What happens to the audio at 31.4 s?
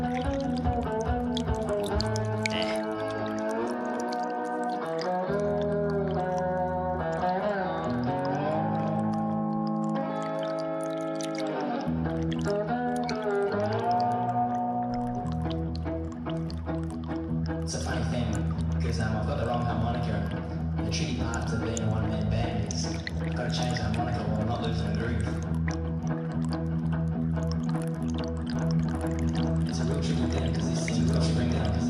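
At 31.4 s a doubled audio track is running, from 28.56 s to the end: a second copy roughly as loud trails by about one second, likely from a slower capture path.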